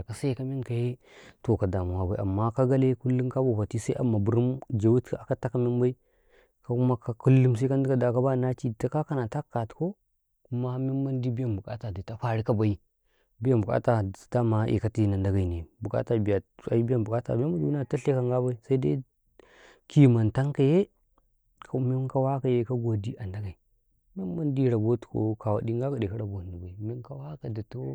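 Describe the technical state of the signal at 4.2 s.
No fault is audible at 4.2 s, and the speech signal is intact at that moment.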